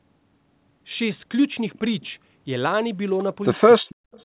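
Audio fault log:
3.77–3.82 s, speech suppressed in double talk: the echo canceller likely mistook overlapping talk for echo, so the sound dips by roughly 40 dB for about 50 ms.
3.89–3.95 s and 4.12–4.23 s, echo leak: the far end's echo canceller likely let some loudspeaker pickup through, returning brief faint copies delayed 272 ms, about 30 and 35 dB down.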